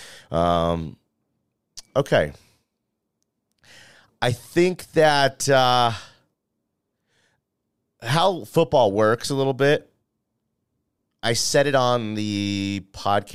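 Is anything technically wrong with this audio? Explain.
No, I can hear no technical fault in this speech recording.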